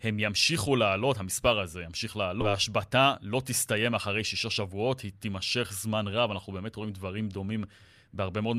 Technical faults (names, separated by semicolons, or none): skip ahead; jitter buffer speed-up